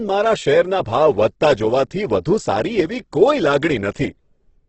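Speech with heavy Opus compression throughout: grainy, rough tone and nothing above 8.2 kHz, likely from the music (CELT) mode at a low bitrate around 12 kbps.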